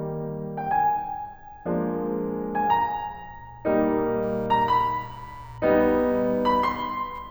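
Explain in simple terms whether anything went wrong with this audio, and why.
From about 4.2 seconds until the music ends, a faint, fast buzzing sits underneath it. This is computer activity noise. The computer's changing workload disturbs the electrical ground that the audio circuit shares, so the buzz follows the machine's activity rather than the music.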